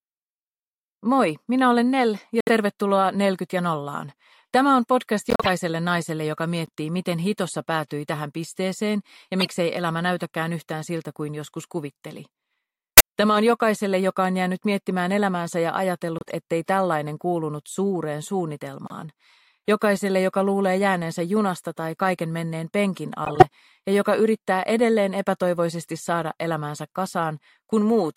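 Eight corrupt frame decoded hits, at 2.40, 5.30, 6.66, 9.39, 12.97, 16.18, 18.87 and 23.25 s, each under a quarter second. Damaged frames get played anyway, spraying energy into wrong frequencies as chirpy blips. The loudest are at 12.97 and 23.25, and 6.66 is the faintest.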